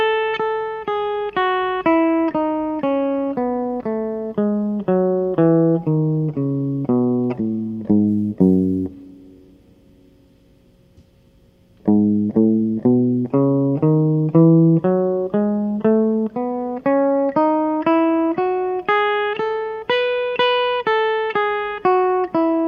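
A music recording, with sample clock jitter from 8.08 to 9.90 s. Across that stretch the converter's timing wobbles by a few microseconds, so each sample lands slightly off its proper instant. The resulting amplitude error tracks how steeply the waveform is changing, which makes it a signal-dependent hiss and graininess riding on the louder and brighter content, sitting roughly 45 dB below the music rather than forming a steady noise floor.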